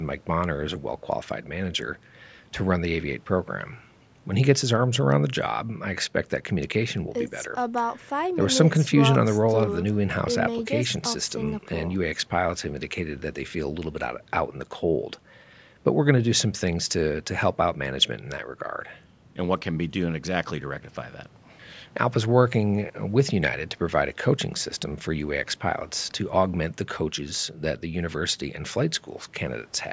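No technical faults can be heard in this speech. The call microphone processing leaves nothing above 8 kHz and trims the lowest bass, as such a path normally does.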